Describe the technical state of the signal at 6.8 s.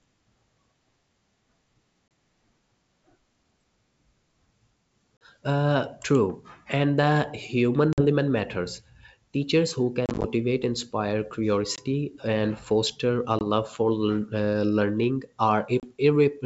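At 6.8 s the audio is intact, with the speech carried cleanly through the G.722 wideband telephone coding at 64 kbit/s and no fault at that moment.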